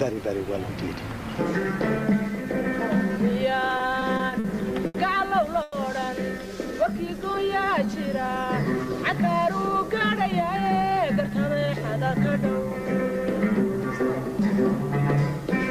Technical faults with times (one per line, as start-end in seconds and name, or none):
3.77-4.46 repeated stalls (stutter)
4.86-4.96 short stall from a late packet
5.62-5.74 call audio freeze
6.47-7.87 jitter buffer slow-down
10.02-11.57 jitter buffer speed-up